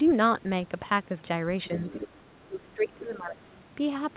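Other side's voice leaking through, from 1.64 to 2.08 s, is the first fault in this speech recording: a second, fainter voice sits roughly 15 dB below the talker. The likely cause is the far end playing on a loudspeaker while the echo canceller leaves part of it in the microphone signal. Speech suppressed in double talk follows from 2.25 to 3.37 s, where the talker's level dips and breaks up for about a second in total, falling by as much as 30 dB at its deepest. This likely happens because both sides speak at once and the canceller, unable to separate the near talker from the echo, pulls everything down. Throughout, the audio carries nothing above 4 kHz, which fits a narrowband G.711 mu-law call path.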